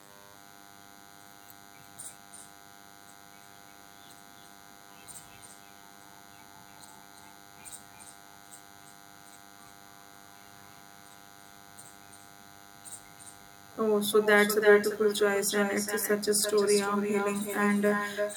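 A nearby DECT transmitter's radio bursts every 10 ms are rectified in the audio circuit, laying a thin, steady DECT cordless phone buzz at 100 Hz, well below the speech, across the whole recording. Throughout, the far end's loudspeaker feeds its microphone with no canceller, so this echo returns each phrase roughly a third of a second later, about 8 dB quieter and thinner.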